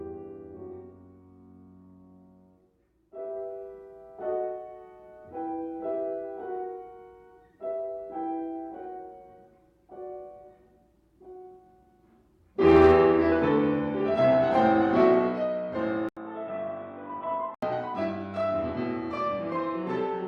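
At 16.09 s an 80 ms silence leads into duller, boxier sound with nothing above 3.8 kHz, roughly 5 dB quieter, over a new faint background until 17.63 s. This is likely an input switched to a poorer device. A simple filter wouldn't add the gap, level drop or changed noise.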